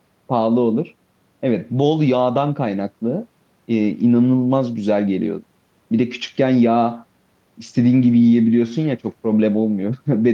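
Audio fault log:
No faults detected across the speech; nothing to log.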